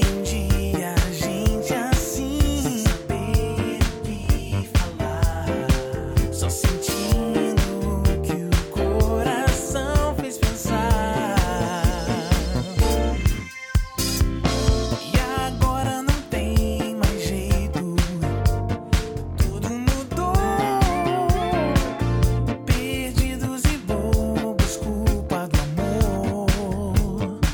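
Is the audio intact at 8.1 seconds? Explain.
Yes, the audio is intact at 8.1 seconds, with no fault to be heard at that moment.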